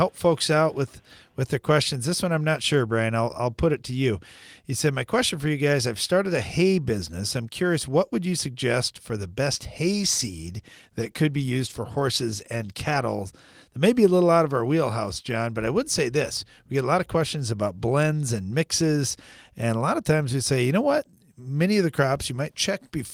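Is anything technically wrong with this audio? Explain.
Yes. A call bitrate drop runs from 9.87 s to 13.17 s, starting just after "suggest for the best". The link's bandwidth estimate fell, so the encoder was given far fewer bits and had to code the sound more coarsely, which fits a fall from about 32 kbps to about 18 kbps. The speech loses detail and turns rougher for roughly 3.2 s at its worst, then regains its clarity as the bitrate recovers.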